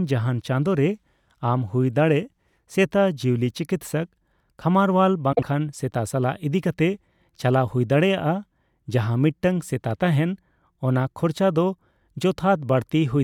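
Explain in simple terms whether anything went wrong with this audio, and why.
Between 5.32 and 5.44 s the speech briefly garbles into a flutter, because of frames out of order: two neighbouring chunks of about 48 ms each played in swapped order. Unlike a dropout, nothing goes missing and no time is skipped.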